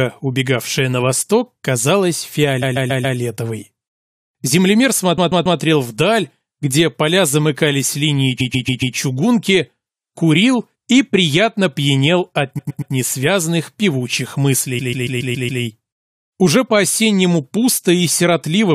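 Repeated frames at 2.61 to 3.17 s, 5.17 to 5.59 s, 8.39 to 8.95 s, 12.57 to 12.92 s and 14.78 to 15.62 s. The decoder plays one block of roughly 139 ms (116 ms at 12.57 s) three to six extra times. This is heard as a stutter.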